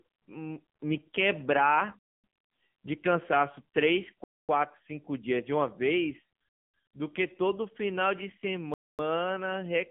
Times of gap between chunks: 1.99-2.24, 4.24-4.49, 6.49-6.74, 8.74-8.99

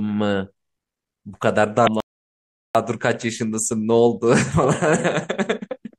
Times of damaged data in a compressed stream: 1.84-1.89

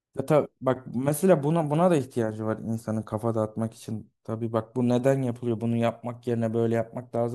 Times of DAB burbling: none

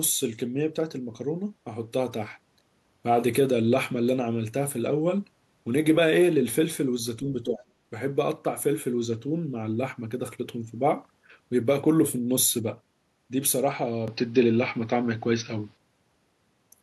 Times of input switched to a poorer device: 14.08-15.77

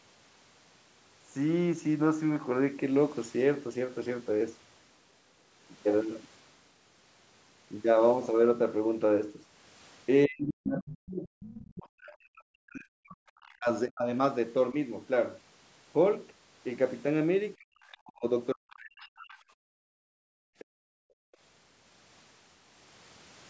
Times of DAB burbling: none

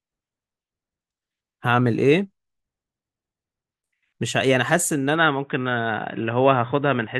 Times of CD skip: none

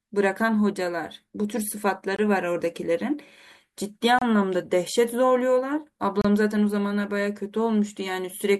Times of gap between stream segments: 2.16-2.19, 4.19-4.22, 6.21-6.25

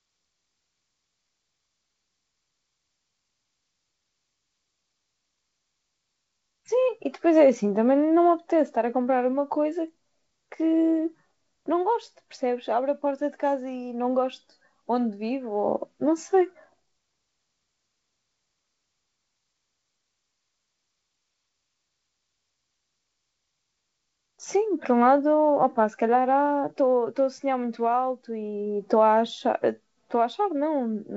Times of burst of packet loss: none

